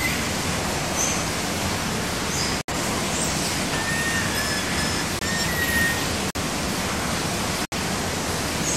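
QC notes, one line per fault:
2.61–2.76 s, 5.19–5.23 s, 6.31–6.38 s, 7.65–7.73 s: corrupt frame muted. Damaged compressed frames were dropped and replaced with silence. Each gap cuts in abruptly, and timing holds.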